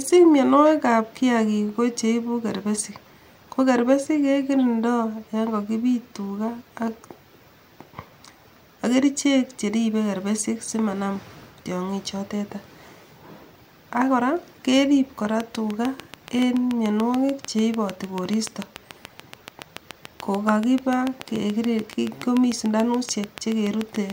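A speech clip with a train of clicks from 15.4 s to 24.1 s, starting after "ak kora kerip kora". Regular ticks come 6.9 times per second, around seventy in all, peaking roughly 10 dB above the speech. Likely cause: nearby interference or a faulty connection or power supply.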